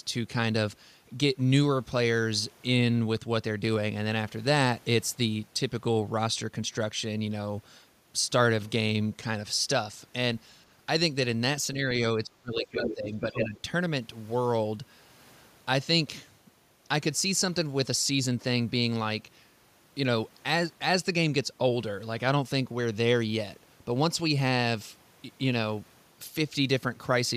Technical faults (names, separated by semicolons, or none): speech suppressed in double talk; other side's voice leaking through